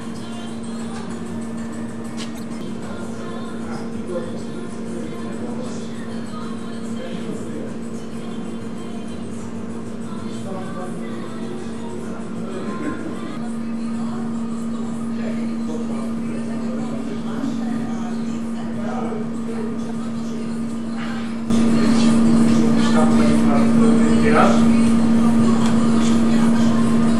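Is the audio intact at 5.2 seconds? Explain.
No, not quite. Right around 5.15 s there's a corrupt frame decoded: a few damaged compressed frames had flipped bits, and the decoder played them anyway, putting energy at the wrong frequencies. It comes through as a tiny blip peaking around -40 dBFS.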